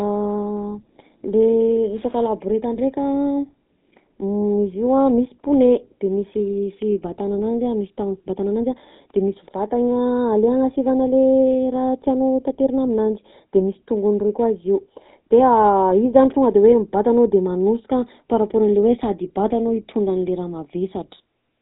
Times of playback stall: none

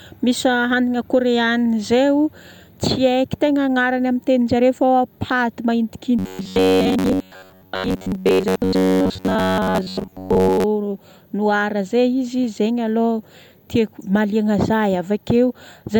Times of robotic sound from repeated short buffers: 6.19-10.65

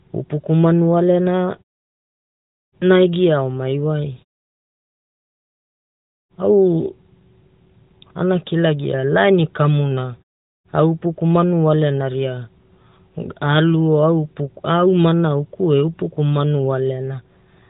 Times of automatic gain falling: none

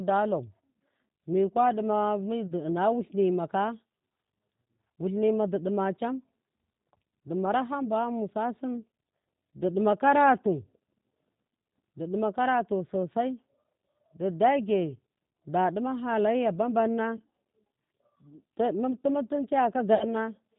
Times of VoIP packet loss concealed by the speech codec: 2.47-2.52, 17.17-17.22, 19.95-20.06

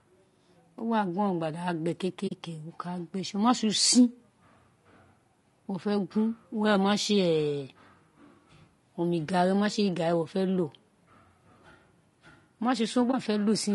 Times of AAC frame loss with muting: 2.27-2.32, 13.11-13.14

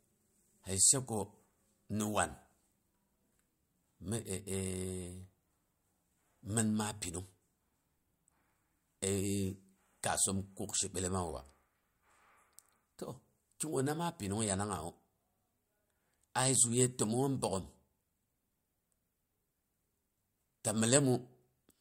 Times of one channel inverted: none

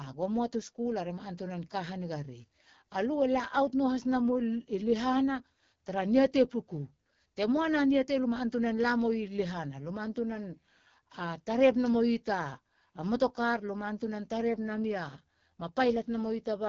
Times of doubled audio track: none

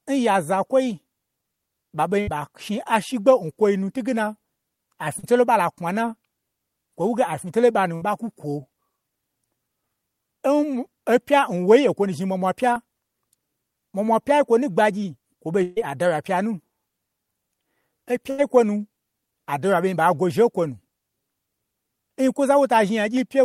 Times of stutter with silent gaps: none

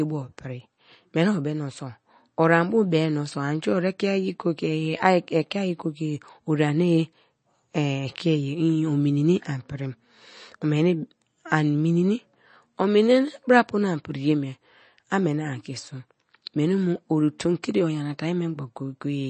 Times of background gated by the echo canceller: none

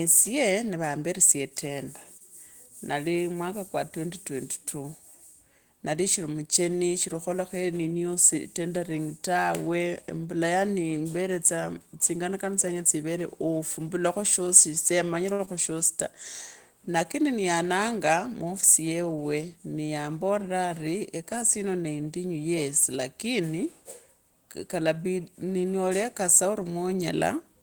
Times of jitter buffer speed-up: 17.55-17.92

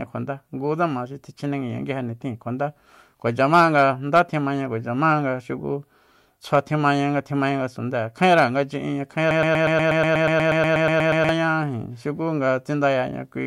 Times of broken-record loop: 9.31-11.29

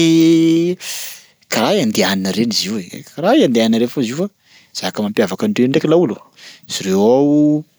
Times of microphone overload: none

